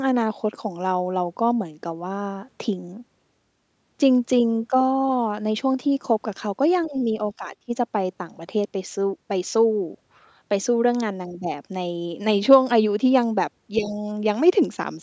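From 6.83 to 7.01 s, a faint second voice sits far below the speech. This is likely the other side's voice leaking through past the echo canceller. From 6.88 to 7.08 s the speech dips moderately, then drops deeply from 7.37 to 7.71 s. Both are likely speech suppressed in double talk, with the canceller turning everything down. From 13.76 to 13.92 s, a slightly louder scrap of the other side leaks through again, likely the same residual echo. From 13.76 to 14.07 s the speech dips mildly, likely another double-talk suppression.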